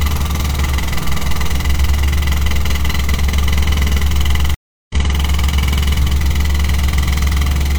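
At 4.54 s the sound cuts to silence for 355 ms, then resumes at 4.95 s about 0.4 s further on: a stream reconnect restarting the decoder mid-stream.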